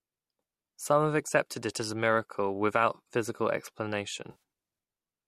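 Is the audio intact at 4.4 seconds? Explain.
No. There is AAC frame loss with concealment from about 4.31 to 4.39 s, ending right at 4.4 s. The decoder lost frames and rebuilt the gap from the last good spectrum. The speech briefly turns smeared, noisy and phasey.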